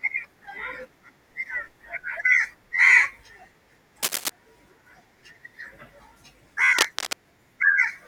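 At 4.03 to 4.30 s and again at 6.78 to 7.17 s there's cable scratch noise: ragged, rustling bursts sitting only a little below the speech. It's likely a worn cable or connector being moved, so its contact resistance jumps around.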